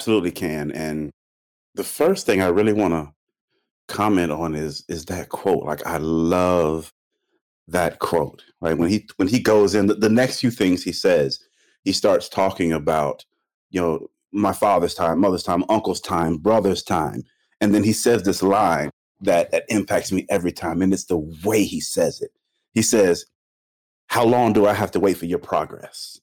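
The speech was driven about 6 dB past what one stage in the chain could pass, so every peak above that ceiling was sliced flat for the whole clip. Only around one percent of samples go over, which means the damage sits on the loudest moments: the squared-off tops throw harmonics high into the spectrum, and the result is a brittle crackle riding on the peaks. It is the signature of hard clipping.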